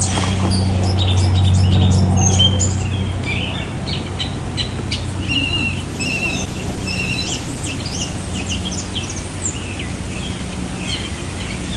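From 5.9 s to 9.01 s a call bitrate drop degrades the sound. The connection's bandwidth estimate fell and the encoder coded more coarsely, which fits a fall from about 48 to 18 kbps. The audio turns rough, watery or muffled, holding at the lowest rate for about 1.8 s, before recovering.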